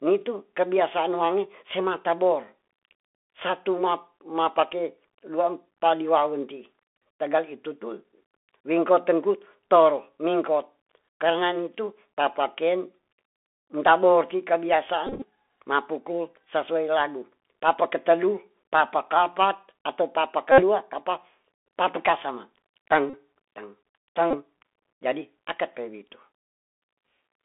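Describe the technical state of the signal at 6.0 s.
At 6.0 s the speech is passing through a Bluetooth CVSD headset codec, which runs through the whole clip. This codec sends one bit per sample, saying only whether the waveform steps up or down, with an adaptive step size, which fits a 64 kbps link. The band is held to roughly 250 Hz to 3.5 kHz. Fast, loud high content outruns the step, so s sounds turn scratchy and a granular hiss sits under the speech.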